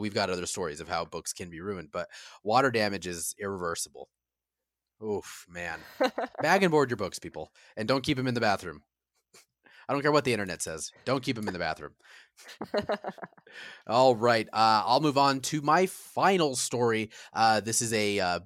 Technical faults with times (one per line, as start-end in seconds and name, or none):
10.72-11.84 Bluetooth SBC bit pool drop